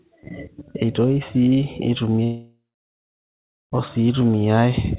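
Speech, carried over a call path whose G.711 mu-law coding leaves nothing above 4 kHz. From 2.24 s to 3.74 s the sound breaks off. The last sound is stretched into a buzz or hiss that fades, and within a few tenths of a second it gives way to silence lasting about 1.1 s. The speech returns at 3.74 s, but 1.48 s of it never plays. This is likely a long network dropout. Packets stopped arriving, the receiver padded the gap with a fading copy of what it last had, and the lost audio was never recovered.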